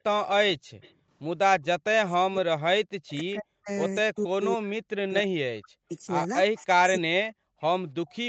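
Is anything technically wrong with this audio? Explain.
Yes, the speech shows three kinds of echo-canceller fault.

From 0.0 to 1.09 s there is background gated by the echo canceller: the room sound dips by up to about 40 dB, for around 0.4 s in total, because the canceller clamped the microphone while the far-end loudspeaker was active, then released it.

An echo leak appears at 0.81–0.93 s, 1.64–2.11 s, 4.16–4.45 s and 6.55–6.65 s, a faint delayed copy of the speech, well below the main voice, lagging by 259, 281, 281 and 304 ms respectively. The likely cause is incomplete cancellation on a loudspeaker-and-microphone end, sending residual echo back.

Speech suppressed in double talk runs from 2.18 to 7.55 s: the talker repeatedly dips, by as much as about 40 dB and for roughly 4 s in total, likely as the canceller, unable to separate local speech from loudspeaker echo while both sides talk, attenuates everything. 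The call's microphone processing, with nothing above 8 kHz, is the normal band limit.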